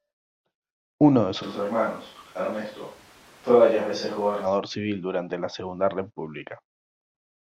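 From 1.44 to 4.45 s the speech turns abruptly hollow and roomy, starting just before "civil durante la" and returning abruptly; likely a switch to a distant microphone.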